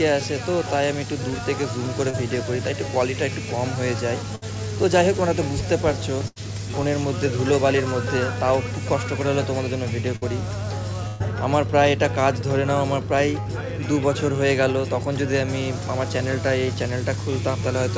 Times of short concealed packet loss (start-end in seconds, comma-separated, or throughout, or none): 2.10-2.15